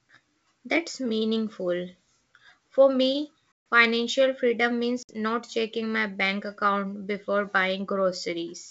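Packets dropped on the ADPCM call at 3.73 s (140 ms lost) and again from 5.03 to 5.11 s (60 ms), leaving the decoder's predictor and step size out of step with the sender's. Each packet loss cuts a hard-edged silent gap in the wideband G.722 speech, which resumes slightly distorted before settling.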